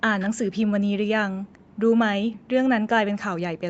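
At 0.19–0.30 s, then briefly at 0.54 and 1.72 s, a faint copy of the speech returns 229 ms late, an echo leak likely from a loudspeaker echo canceller letting residue through. The first is about 15 dB down, the others near 35 dB. A spectrogram shows faint, delayed duplicate harmonics.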